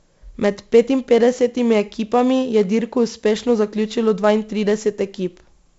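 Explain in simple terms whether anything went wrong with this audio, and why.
Something did go wrong, and it lasts the whole recording. The speech has been squeezed with 4-bit ADPCM compression. That method saves each moment of sound as a rough guess plus a tiny correction. The corrections are too coarse, so a gritty hiss rides on every loud syllable. Sharp starts of sounds come out harsh and broken. The damage here is heavy. The sound is also dull, with nothing above about 7.7 kHz, which suggests a low sample rate.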